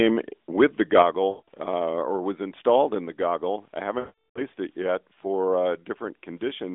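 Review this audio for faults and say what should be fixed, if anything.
Lost AMR speech frames occur at 1.30 to 1.48 s and again at 4.00 to 4.41 s. Radio errors corrupted consecutive frames, and the decoder extrapolated the last good pitch and vocal tract parameters at decreasing gain. The first gap of 180 ms, consistent with about nine 20 ms frames, smears and fades. The second, 360 ms long, decays fully to silence before the signal returns weak and rough. Prevention: improve radio link quality or enable stronger channel protection so fewer frames fail their checksum.

Microphone volume stepped down at 3.06 s, an abrupt level drop of about 2 dB affecting foreground and background equally. The likely cause is call software reacting to a loud input by cutting the device's input volume in a single step. Prevention: disable automatic microphone gain control and set a fixed input level with adequate headroom.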